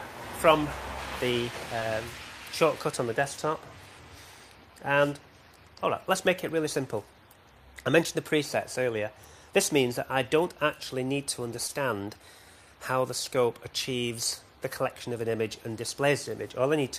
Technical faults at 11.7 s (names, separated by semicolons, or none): short concealed packet loss